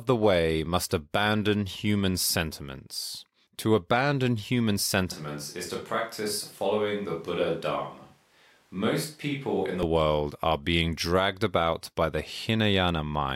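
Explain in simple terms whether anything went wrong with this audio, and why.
A switch to a distant microphone happens from 5.11 to 9.83 seconds, right after "sentiments to abandon human" and ending before "world are being dragged". The speech suddenly turns hollow, roomy and quieter, likely because the close microphone dropped out and a farther one was used.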